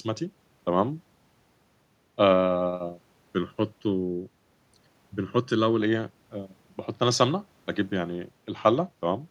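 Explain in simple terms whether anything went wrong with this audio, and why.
From 3.01 to 5.80 s the speech turns hollow and phasey. That's channel delay (comb filtering): one side runs under a millisecond late, cancelling tones at evenly spaced pitches starting around 700 Hz.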